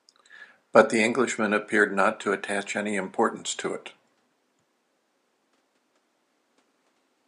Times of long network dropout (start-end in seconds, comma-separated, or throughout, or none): none